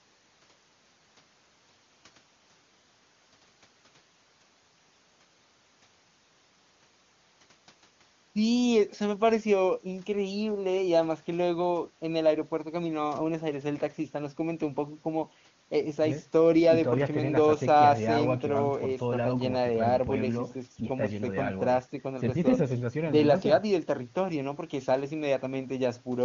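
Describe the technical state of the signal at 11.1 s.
At 11.1 s the speech is intact, carried by the AMR wideband (HD Voice) codec at its top rate of 23.85 kbit/s, where its coding damage is faint at most.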